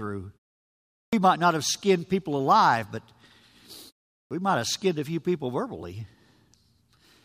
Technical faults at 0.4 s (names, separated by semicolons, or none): none